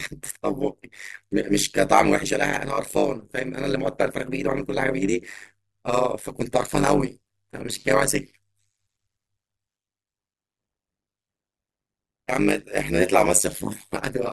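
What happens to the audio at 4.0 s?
At 4.0 s the speech carries overlap-add ripple, like the whole clip: the frame overlap doesn't sum flat, so level dips about 60 dB around 100 times a second, giving a metallic buzz with extra tones around the voice.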